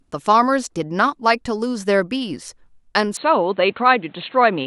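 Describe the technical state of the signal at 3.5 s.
At 3.5 s the signal sits inside a span from 3.17 s to the end of the clip where the input has likely switched to a poorer device. The speech abruptly loses everything above 4.3 kHz and takes on a duller, boxier tone, with a new background noise floor roughly 35 dB below the speech. There is no gap at the changeover and the overall level stays about the same, so the only cue is the narrower band and different noise.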